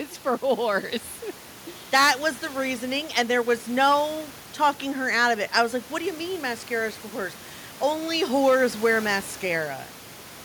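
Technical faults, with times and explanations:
No technical fault can be heard in the speech signal, and the room noise sits about 23 dB below the speech as part of the original recording.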